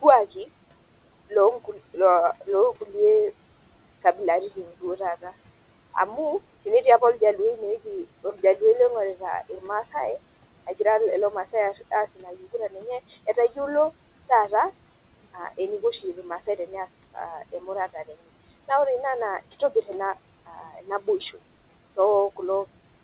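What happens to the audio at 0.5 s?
At 0.5 s the speech passes through intact, with only the room noise about 21 dB below it and the narrowband call path's usual cut-off near 4 kHz.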